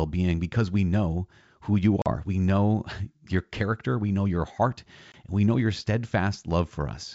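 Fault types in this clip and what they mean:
Packet loss on an ADPCM call: gaps of 40 ms after "we know who you" and 20 ms after "we know your heart", then a shaky restart while the decoder resyncs.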